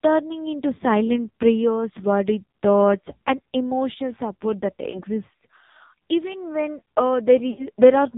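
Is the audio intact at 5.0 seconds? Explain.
No. From 4.90 to 5.03 s there are lost AMR speech frames. About 40 ms of data is missing, which fits two dropped 20 ms frames. The decoder fills the gap by repeating the last good pitch and vocal tract settings at falling gain, so the sound smears and dips briefly instead of cutting to silence. That smeared dip separates it from a hard dropout or a plain click.

Underneath, the whole clip runs through the AMR narrowband mobile codec at 5.9 kbps. Nothing above 4 kHz passes, and the speech is heavily buzzy and synthetic. That coded, vocoder-like roughness is what separates it from a simple low-pass filter, which would only dull the sound.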